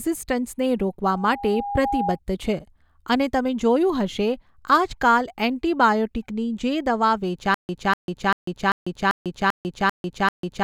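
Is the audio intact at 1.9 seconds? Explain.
No. Loudspeaker feedback squeal runs from 1.07 to 2.19 s, just before "છે અને તમે જોયું": an 811 Hz tone swells over roughly 0.7 s as the microphone re-amplifies the loudspeaker, reaching about the speech level.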